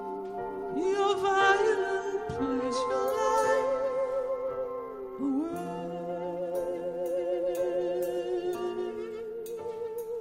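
No technical faults are audible.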